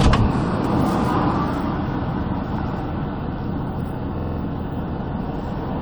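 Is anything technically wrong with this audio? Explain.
Yes, there is one fault. Repeated frames from 4.19 to 4.38 s: a 46.4 ms block, which fits two compressed frames, plays four extra times, adding 186 ms and a stutter.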